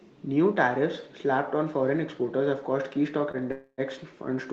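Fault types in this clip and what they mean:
Short stall from a late packet: At about 3.31 s the speech briefly hangs. One sound is held a little too long, with a faint buzzy smear, before the speech picks up from the same point. It lasts about 23 ms, and none of the speech is lost. The next packet arrived late, so the jitter buffer ran dry and the receiver stretched the last sound until it came. That adds 23 ms of delay.
Call audio freeze: From about 3.52 s to 3.81 s the speech stops moving forward. The last sound carries on as a fading buzz that sinks into roughly 60 ms of silence, and then the speech resumes exactly where it stopped. About 260 ms of filler has been inserted and nothing is missing. The likely cause is packets held up in transit, which emptied the jitter buffer. This happened over a call path whose high end is cut off at 8 kHz.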